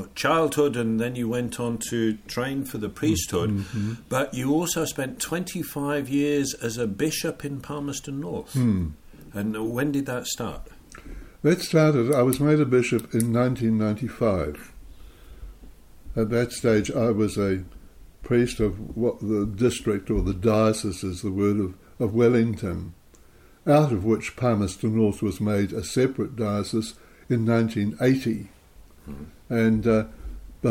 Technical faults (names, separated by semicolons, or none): none